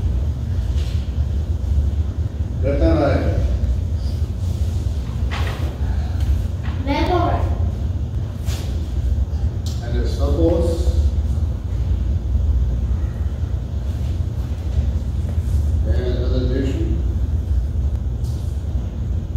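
From 0.22 s to 18.69 s, a click repeats every 0.683 s, about thirty in all. These are clock drift buffer slips. Two clocks likely disagree by roughly 500 ppm. The buffer drifts until around fifteen samples are dropped or repeated.

Separate single clicks land at 1.92 s, 8.15 s and 17.96 s. Each is likely a case of dropped samples. Under a millisecond of audio goes missing. The waveform jumps abruptly. Each one sounds like one sharp tick, too brief to remove sound.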